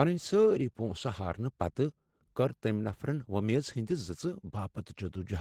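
Opus voice compression runs through the whole speech clip, with plainly audible damage. The band stays full, reaching about 20.2 kHz, but the sound points to hybrid coding: linear prediction carries the speech below 8 kHz and a transform layer fills in the top. At a rate that fits about 16 kbps, the excitation is coded coarsely, giving the voice a hoarse, slightly synthetic edge. The artefacts are consistent with 20 ms frames.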